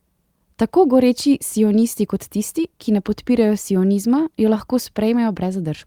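No technical faults are audible.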